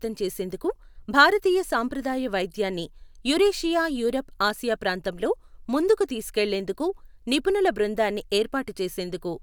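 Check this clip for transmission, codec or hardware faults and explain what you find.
No transmission, codec or hardware faults can be heard anywhere in the recording; the speech signal stays continuous and intact throughout.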